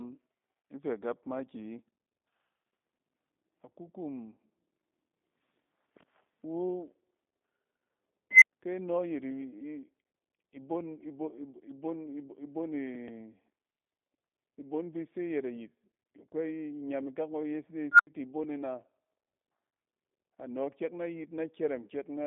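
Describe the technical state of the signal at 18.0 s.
At 18.0 s a recursive filter has gone unstable. Faulty coefficients let its output feed back and grow without bound from 17.91 s to 18.07 s. A tone somewhere around 1.5 kHz swells over about 80 ms into a loud squeal, hits clipping, and then the overflowing values collapse to nothing, leaving roughly 79 ms of silence before the filter resets and the speech returns.

Underneath, the line carries G.729 coding throughout, with plainly audible damage. The speech is rebuilt from a vocal tract model, a pitch predictor and a few pulses per 5 ms subframe, and the result fits 8 kbit/s G.729A. The band runs from about 200 Hz to 3.7 kHz, with nothing above 3.8 kHz, so the speech sounds muffled, slightly rough and synthetic.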